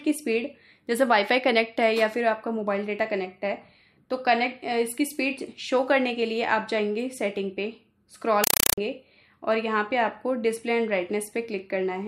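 Compressed stream played as audio, 8.44 to 8.78 s: loud chattering static of 4 ms bursts at 31.25 Hz, fitting undecoded AC-3 data read as samples.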